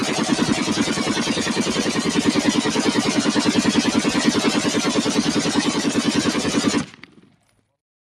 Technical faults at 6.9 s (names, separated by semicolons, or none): noise suppressor applied to music or sounds; sound cut by the noise suppressor